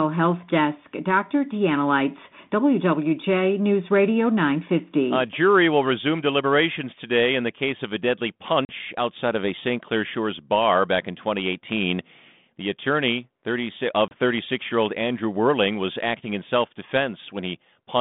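At 8.65 s, after "case of a deadly", there's packet loss on an ADPCM call: 40 ms drops to hard-edged silence, and "outside of a" comes back distorted until the decoder's predictor and step size resync. Same again at 14.08 s, a 30 ms hole before "year old".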